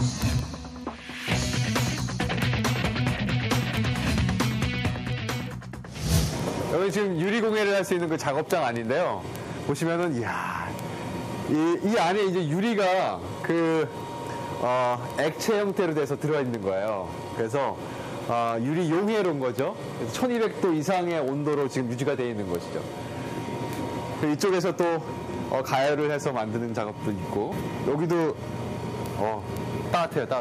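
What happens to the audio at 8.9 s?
At 8.9 s the audio sits inside a continuous run of word clock ticks that lasts from 0.14 s to 30.33 s. The receiving device is running on its own clock rather than locking to the sender, with a mismatch of roughly 300 ppm. Each time the two clocks slip by a sample, one sample is dropped or repeated. This produces sharp ticks of uneven strength at a steady rate of roughly ten per second.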